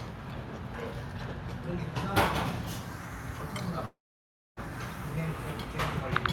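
At 3.85 s the sound breaks off and, for about 0.74 s until 4.60 s, the listener hears only a brief buzzy continuation of the last sound that fades quickly, then roughly 0.62 s of near-silence before the audio resumes further along. About 0.72 s of material never plays. This is most likely a long network dropout, with the receiver concealing the gap. On a spectrogram, a short smeared, decaying band gives way to an empty column. On the waveform, the envelope collapses to flat.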